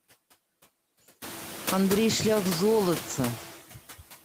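Speech runs through noise suppressor artifacts from start to finish. The suppressor pulls the background down by about 13 dB between phrases and lets it rise under them, so the residue pumps, and the room noise climbs by about 20 dB around one second in, to sit roughly 14 dB below the voice.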